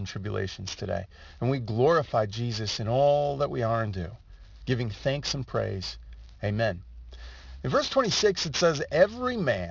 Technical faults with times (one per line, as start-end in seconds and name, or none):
0.00-9.71 aliasing